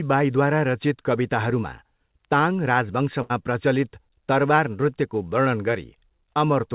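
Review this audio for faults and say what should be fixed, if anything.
There is a burst of packet loss from 3.22 to 3.32 s, just before "प्रचलित तरवार नृत्यको वर्णन". Several packets never arrived in time. The receiver stretched the last received sound for about 75 ms, fading it down as it went. Speech then resumes with about 80 ms of the original missing. The band ends near 4 kHz, which fits a G.711 call path. A larger jitter buffer or forward error correction on the link would help prevent this.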